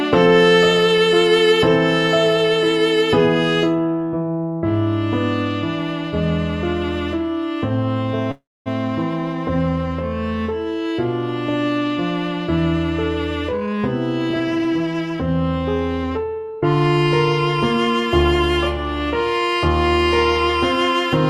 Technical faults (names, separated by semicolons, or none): call audio freeze; jitter buffer speed-up